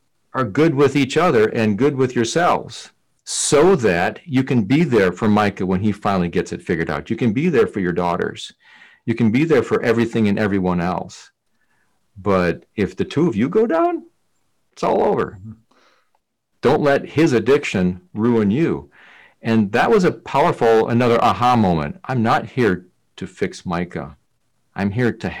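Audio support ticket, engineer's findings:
Hard clipping throughout the speech: some gain stage or converter driven about 12 dB past full scale, peaks cut flat on roughly 4 percent of samples. Flat tops add high harmonics, so harsh fuzz on every loud syllable.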